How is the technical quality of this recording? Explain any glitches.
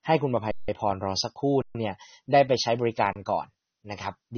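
The recording has clear technical damage: band-limited, smeared codec sound throughout, three brief dropouts, and overly bright treble for most of its length.

AAC compression runs through the whole clip. The sound is dull and smeared with a warbling texture, and nothing is present above 6.3 kHz. This likely comes from AAC-LC at a low bitrate, around 27 kbps.

Underrun with held sample occurs at 0.51 to 0.68 s (171 ms), 1.62 to 1.75 s (128 ms), and 3.13 to 3.16 s (27 ms). Each time, the output buffer ran dry and the last sample value was held, so the sound freezes flat rather than clicking. Playback then resumes where it stopped, without losing audio. The longest gap fits an 8192-sample buffer.

Pre-emphasis left on starts at 0.91 s and lasts to the end. It follows a 75 µs FM curve with no matching de-emphasis, lifting 10 kHz by about 13 dB relative to 1 kHz. The sound turns thin, bright and sibilant.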